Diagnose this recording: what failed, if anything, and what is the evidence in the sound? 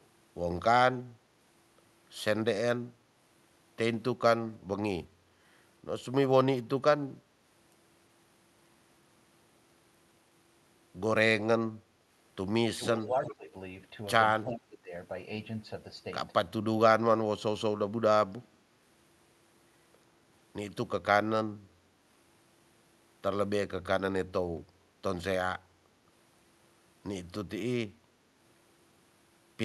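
Call processing stage. Speech suppressed in double talk appears at 12.74 to 13.54 s and 14.46 to 14.92 s. The speech dips by up to about 20 dB, for roughly half a second each time. The echo canceller likely treated overlapping talk as echo and attenuated it.

Call processing stage again. An echo leak is heard at 12.85 to 12.89 s and 13.24 to 13.35 s. Short delayed copies of the speech arrive 353 ms late, about 15 and 20 dB below it. A loudspeaker's residual echo likely got past cancellation and came back.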